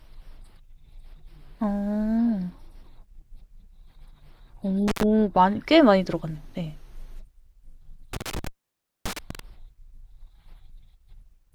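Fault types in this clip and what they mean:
intermittent contact: A loose cable or plug briefly loses connection, so the speech drops out with crackle at each edge and faint hiss remains while the line is open. Here it opens for about 96 ms near 4.9 s, then for about 0.58 s between 8.1 s and 9.4 s.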